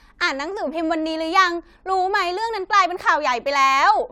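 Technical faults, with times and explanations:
The speech recording carries no technical faults at any point. There is nothing here to time or explain.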